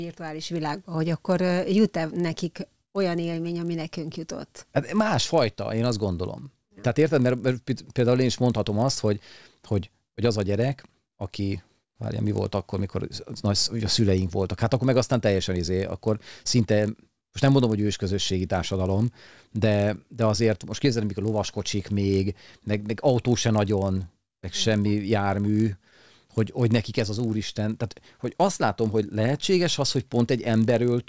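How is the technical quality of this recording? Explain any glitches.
Not great: there's one persistent glitch. The resampler restarted on every block, throughout the speech. Each 20 ms chunk was converted in isolation, consistent with 48 kHz to 16 kHz, so every edge gets a small error, giving a 50 Hz buzz that rides along only while someone's talking.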